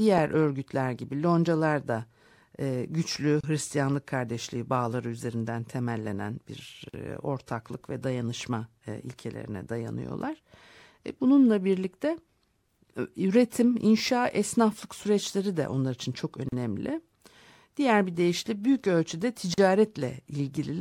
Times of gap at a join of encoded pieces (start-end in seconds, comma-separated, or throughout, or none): 3.41-3.44, 6.89-6.94, 16.49-16.52, 19.54-19.58